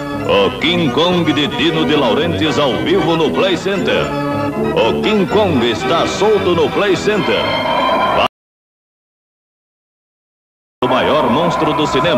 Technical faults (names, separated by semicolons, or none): audio dropout to silence